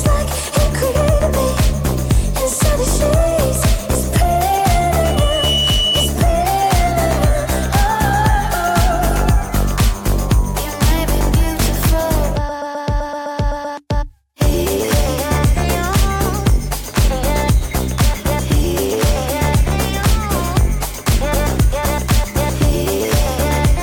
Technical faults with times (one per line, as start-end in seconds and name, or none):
5.03-6.14 loudspeaker feedback squeal